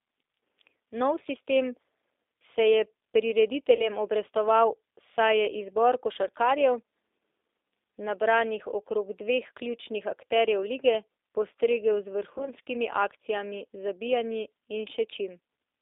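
Throughout the speech, the audio passes through what sounds like the G.729 codec, likely at its 8 kbit/s rate. It rebuilds each 10 ms frame from a vocal-tract filter, a pitch predictor and sparse pulses, and the band is held to roughly 300 Hz to 3.7 kHz. The codec damage is plainly audible as a rough, synthetic texture.

From 3.75 to 3.89 s, VoIP packet loss concealed by the speech codec fills a gap of about 40 ms, which fits two lost packets. The decoder stretches its last pitch and filter into a sound that fades as the gain drops frame by frame. Because each frame builds on the one before, the sound stays weak until about 3.89 s. The same fault returns from 12.38 to 12.51 s, where a 20 ms gap fits one lost packet. It causes a shorter concealed stretch, and the sound takes a moment to recover.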